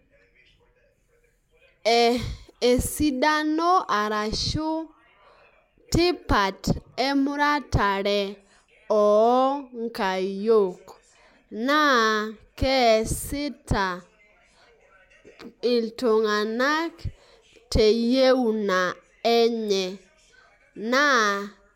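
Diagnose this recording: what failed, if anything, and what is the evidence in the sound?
Nothing seems to have failed here; the speech comes through with nothing that points to trouble at any stage of the chain.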